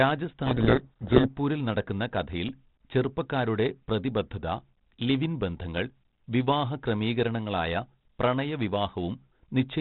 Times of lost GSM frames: none

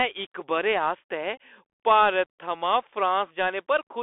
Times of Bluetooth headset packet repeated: 1.36

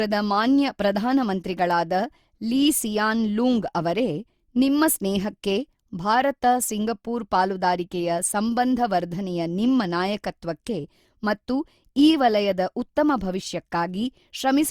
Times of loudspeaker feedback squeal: none

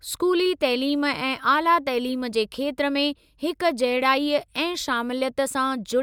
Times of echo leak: none

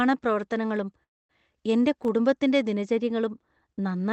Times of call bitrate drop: none

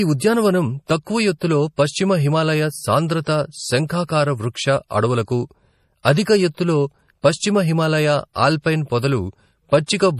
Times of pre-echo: 1.39-1.41, 6.03-6.05

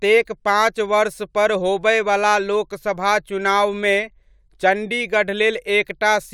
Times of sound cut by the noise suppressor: none

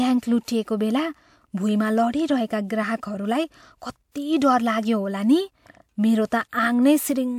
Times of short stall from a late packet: none

